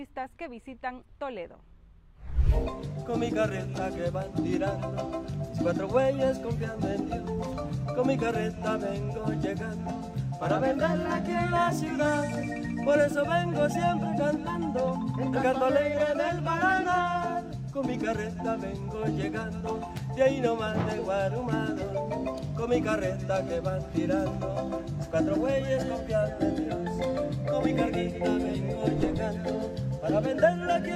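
No technical faults can be heard anywhere in the audio.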